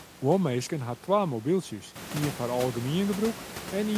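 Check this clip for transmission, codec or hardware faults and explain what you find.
I find no transmission, codec or hardware faults in this clip, only room noise that rises by about 12 dB at roughly 2 s and stays about 12 dB below the speech.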